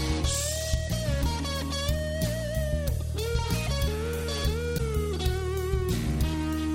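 Broken MP3 bit reservoir at 4.77–4.80 s: a 30 ms glitch, likely a cut frame leaving the next 26.1 ms frame reading another frame's bytes.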